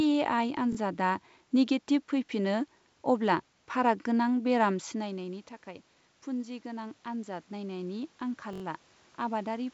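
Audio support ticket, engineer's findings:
Repeated buffer, playback device. New audio missed its deadline at 0.73–0.77 s, 2.26–2.28 s and 8.53–8.62 s, so the last block was replayed twice, once and four times. About 21 ms per repeat, which fits a 1024-sample buffer. Audible as short stutters with hard joins. No audio appears lost.

Automatic gain rising, capture side. From 6.28 s, just after "गोनां बेराम सिनायनायनि थाखाय", input fell by about 13 dB. AGC responded by ramping gain up gradually through to the end. Voice and background swell together over a second or more rather than stepping.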